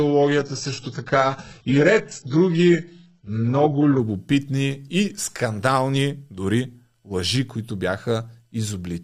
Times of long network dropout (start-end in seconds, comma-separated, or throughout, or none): none